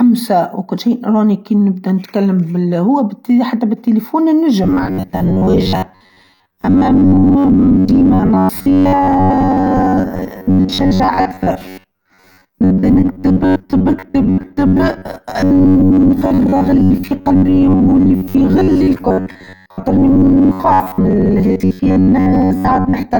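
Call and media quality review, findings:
Robotic sound from repeated short buffers, 4.64 s to end of clip. Speech becomes a rigid metallic buzz near 94 Hz that still roughly tracks the speech. The buzz pitch points to a repeated segment of about 10.7 ms. Likely cause: receive-side buffer underrun, with the concealment stage looping the last short buffer while fresh audio is skipped. Roughly half the signal is repeated material.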